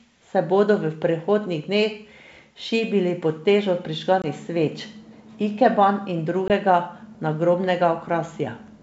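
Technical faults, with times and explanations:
4.22–4.26 s (after "šibili pod težo") and 6.48–6.52 s, packet loss on an ADPCM call: one 20 ms packet lost each time, leaving a flat waveform gap and a blank spectrogram stripe. The decoder's predictor then mistracks, so the speech returns slightly distorted before settling.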